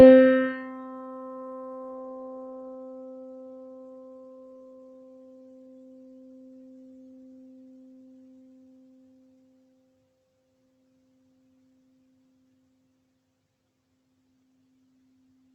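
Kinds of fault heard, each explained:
No faults can be heard anywhere in this audio.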